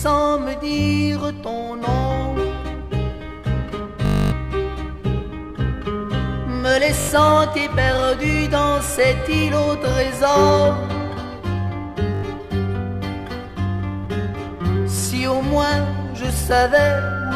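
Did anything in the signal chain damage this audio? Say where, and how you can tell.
Yes. A rapid machine-gun buzz replaces the sound from 4.06 to 4.32 s, and again briefly at 7.00–7.09 s and 12.15–12.23 s. This is Bluetooth stutter on the wireless link: the receiver looped its last short buffer while packets were missing, about 264 ms and 81 ms lost, then resumed further on.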